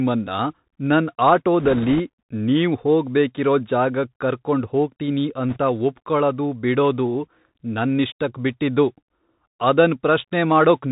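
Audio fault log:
Throughout: Bluetooth CVSD headset codec. The speech comes through a narrowband one-bit delta link at 64 kbps, so everything above 4 kHz is gone and the top end sounds boxed in. You can plainly hear the step size struggling: loud, bright bits outrun the step and smear, s sounds come out scratchy, and there's a fine granular hiss sitting under everything where the encoder keeps nudging up and down around quiet passages.
1.60–2.01 s and 5.50–5.58 s: bit errors on a Bluetooth voice link. Over these two stretches the speech picks up a rushing, crackly layer, longer in the first and just a brief burst in the second. It sounds like a few percent of the bits were flipped. Because every CVSD bit only nudges the level a little and mistakes fade out, you get a gritty wash rather than sharp clicks or dropouts.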